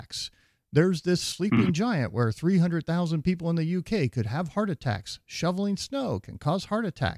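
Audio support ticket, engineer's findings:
Speech recording checked end to end; no audible faults found, no fix required.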